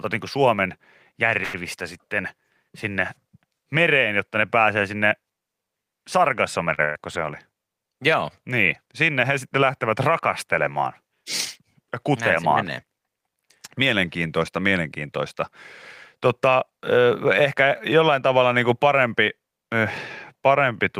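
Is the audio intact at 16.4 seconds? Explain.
No. At 16.4 seconds the clip is inside a jitter buffer speed-up running from 16.17 to 17.27 s. The receiver's buffer had built up more audio than its target, so it trimmed short pitch-period-sized pieces over and over, cutting around 70 ms in total. The speech plays at about 107% speed with its pitch unchanged, giving a slightly hurried, compressed stretch that ends just before "ehkä jollain tavalla niin".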